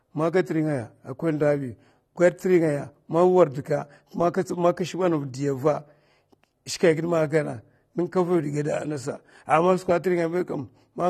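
From start to finish the speech carries the marks of AAC compression, most likely AAC-LC at a low rate; the damage fits something around 32 kbps. Nothing gets through above about 13.1 kHz, so the top end sounds dull and closed in. Because the encoder starves fine spectral detail at that rate, sibilants turn fizzy and smeared, and held sounds pick up a warbling texture that's plainly audible the whole way through.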